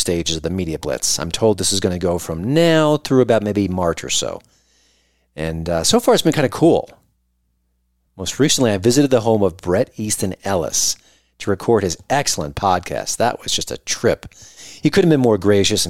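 No technical faults are audible anywhere in this speech recording.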